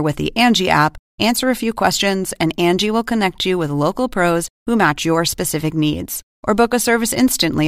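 No technical faults are audible.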